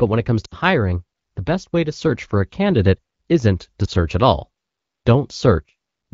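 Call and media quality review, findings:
Dropout at 0.45–0.55 s, right after "when it comes": sound collapses toward near silence, then returns weak or rough for a moment. Lost AMR speech frames: a run of about 60 ms, three 20 ms frames, failed checksum. The AMR-WB decoder's concealment replays the last good pitch and vocal tract settings at falling gain.

Dip or warble at 3.86–3.90 s, between "a candidate isn't to" and "at all". Lost AMR speech frames: a single 20 ms frame, concealed by extrapolating from the previous frame. The surrounding wideband audio fits the AMR-WB codec at 12.65 kbit/s.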